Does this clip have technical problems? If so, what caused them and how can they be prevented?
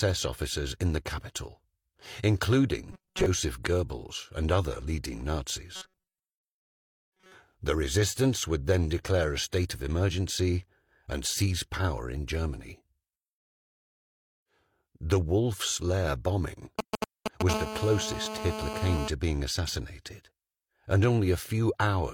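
Yes. Robotic sound from repeated short buffers appears at 2.92 to 3.26 s and again at 5.75 to 7.34 s. The sound turns into a rigid metallic buzz at 188 Hz. The likely cause is new audio arriving too seldom, so playback keeps repeating a fragment of about 5.3 ms and skips most of the real audio. Giving the audio thread higher priority or a larger, steadier buffer prevents this.

GSM signalling bursts run from 16.79 to 17.51 s. A galloping dit-dit-dit of short buzzes at about 217 Hz sits at roughly the same level as the sound, caused by a nearby 2G phone's bursts being rectified in the audio circuit. Keeping phones well away from cables and equipment, or switching them off, prevents it.

GSM phone buzz follows directly, from 17.51 to 19.08 s. It is a steady, raspy 217 Hz buzz with many harmonics, about 7 dB below the sound, as the phone transmits in bursts 217 times a second during a call. 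Shielded, properly grounded cabling and distance from the phone prevent it.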